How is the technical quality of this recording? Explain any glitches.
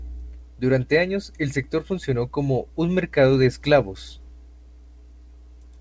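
No glitch occurs anywhere in the recording: the speech arrives through a call path that is working as intended, and the audio holds nothing above 8 kHz, which points to a wideband call codec.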